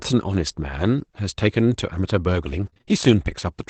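From 2.61 to 2.89 s the speech turns choppy: repeated packet loss (robotic sound). Five short gaps, none longer than 25 ms, are each patched by stretching the preceding sound, so about a third of this stretch is filled-in sound rather than one clean dropout.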